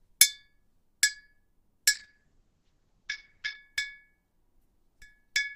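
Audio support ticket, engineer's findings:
Sound goes muffled and rough, 1.98 to 3.67 s, top end gone above 8 kHz. Call bitrate drop: bandwidth estimate fell, encoder coarsened and narrowed band for about 1.6 s. Fits a fall from roughly 48 to 8 kbps.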